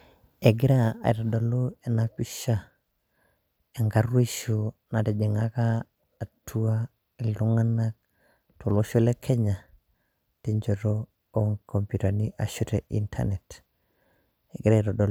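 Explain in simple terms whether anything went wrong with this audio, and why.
Nothing went wrong here; the speech comes through with no dropouts, clicks, distortion or glitches anywhere in the recording.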